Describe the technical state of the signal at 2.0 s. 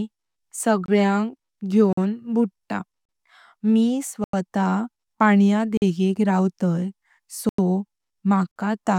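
Just before 2.0 s, from 1.93 to 1.97 s, a block of digital silence drops the speech for about 46 ms, which fits an unfilled 2048-sample buffer. It sounds like a brief hole. The waveform shows a near-flat line, and the spectrogram a blank column edged by broadband vertical streaks.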